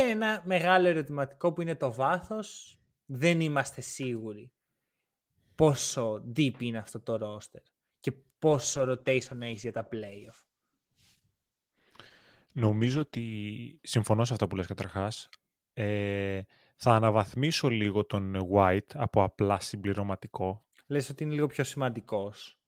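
A call bitrate drop affects this speech clip from 8.47 to 13.39 s, ending just before "συμφωνώ σε αυτά που". The encoder, starved of bits, codes coarsely and trims the highs, leaving rough, muffled sound that fits a fall from 32 to 13 kbps.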